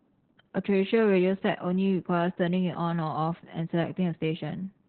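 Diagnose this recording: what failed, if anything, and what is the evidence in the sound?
The fault lies at the codec stage: Opus voice compression runs through the whole speech clip. Nothing reaches above 4.2 kHz, so the sound is muffled, hoarse and slightly robotic, which points to the SILK coder in narrowband mode at a very low bitrate, around 8 kbps, coding the excitation coarsely in 20 ms frames. A spectrogram shows a hard, flat ceiling near 4.2 kHz from start to finish, with smeared, grainy harmonics below it.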